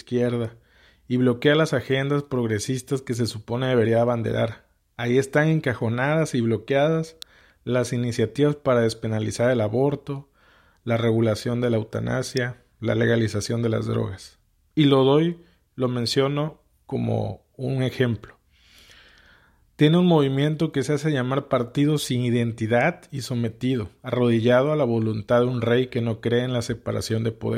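At 7.22 s and again at 12.37 s, a sharp snap sits on top of the speech, each peaking around -15 dBFS. These are electrical switching spikes, likely a nearby switch arcing into the line. Unlike dropouts, the speech continues underneath.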